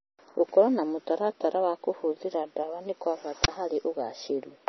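Across the whole speech recording the sound is dull and watery, with nothing above 5.9 kHz, swirling sibilants and smeared onsets. That points to heavy MP3 compression, likely at a low bitrate around 25 kbps, where the encoder cuts the treble and drops weak frequency lines. At 3.44 to 3.48 s, right after "kũhũthĩra ndawa nĩ kwa", a harsh, loud 40 ms burst of digital noise cuts in. This is an uninitialised buffer: a block was played before audio was written into it, so leftover memory came out as samples.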